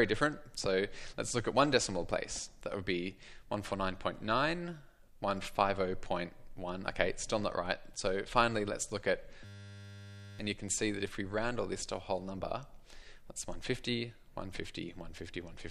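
From 9.45 s to 10.39 s the sound gives way to a flat, steady buzz pitched at 100 Hz, and about a second of audio is missing when it resumes. This is a system hang loop: the computer or its audio driver stalled while the sound hardware kept replaying whatever sat in its ring buffer. That buffer held only 10 ms, so one tiny slice repeated back to back, and at 100 repeats a second the repetitions fuse into a tone.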